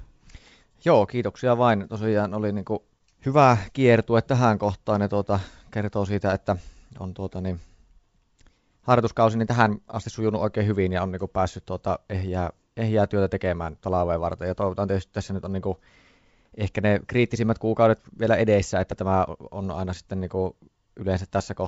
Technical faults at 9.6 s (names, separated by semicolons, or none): none